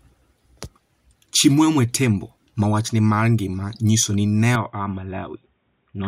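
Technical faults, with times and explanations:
4.55–6.08 s, input switched to a poorer device: right after "ngima nyiso ni ne" the speech turns dull and boxy, with nothing above 3.8 kHz, and it drops about 5 dB in level, with no gap at the change. A faint new background noise sits far below the speech. The likely cause is the recording moving mid-take to a narrower-band microphone or a headset's call profile, which brings its own bandwidth, gain and noise floor.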